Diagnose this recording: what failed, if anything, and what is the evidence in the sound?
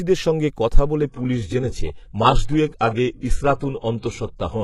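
At 1.02 s the speech turns suddenly dull, with nothing above 11.5 kHz and rising codec artefacts. It stays that way to the end, with no gap. This is the network stage: an adaptive stream at a lower bitrate, consistent with a switch to a low-rate HE-AAC version.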